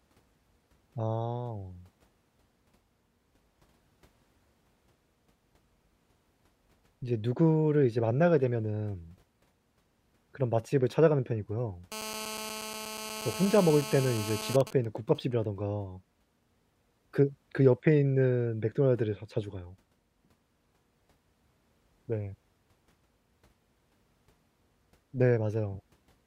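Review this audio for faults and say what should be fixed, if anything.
From 11.92 to 14.56 s, a nearby 2G phone on an active call was transmitting in bursts 217 times a second, and the audio circuitry rectified that radio energy. The result is GSM phone buzz: a hard, raspy 217 Hz tone with many harmonics, about 11 dB below the speech and unrelated to it. To prevent it, keep phones switched off or well away from microphones, preamps and cables during recording.

From 14.61 to 15.45 s, a nearby 2G phone was in a call while its user was silent, so it sent only short groups of bursts, which the circuitry again rectified. These GSM signalling bursts produce even ticks with a longer 217 Hz buzz twice a second, roughly 20 dB down. The same distance from phones, along with shielded, properly grounded cabling, would prevent this.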